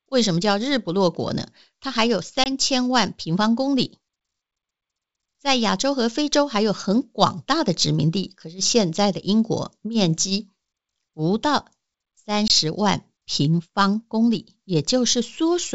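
At 2.44 s and again at 12.48 s the speech drops out for about 20 ms, a hard-edged hole the size of a single lost packet. This is packet loss on an ADPCM call. Unlike a simple dropout, the trouble continues after the gap: the decoder's adaptive predictor and step size have drifted from the sender's, so each time the sound returns slightly distorted before settling within some tens of milliseconds.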